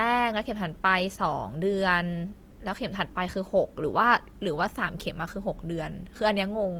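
Throughout the clip the speech sounds grainy and rough, its tones turned noisy rather than swirly, though the audio still extends up to 20.2 kHz. The likely cause is Opus compression in music mode filling bit-starved bands with noise, which fits a bitrate near 24 kbps.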